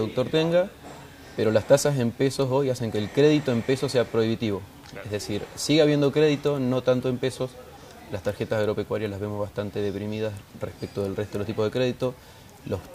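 No technical faults can be heard anywhere in the audio.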